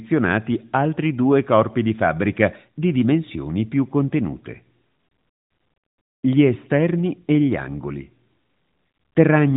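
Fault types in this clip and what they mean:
No faults are present in this speech recording.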